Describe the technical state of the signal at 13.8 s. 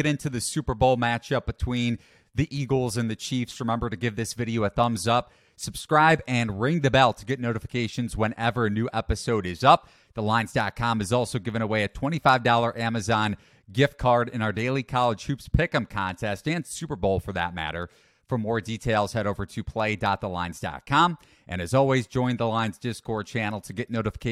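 At 13.8 s the speech signal is intact, with no dropout, clipping, distortion or other audible fault at that moment.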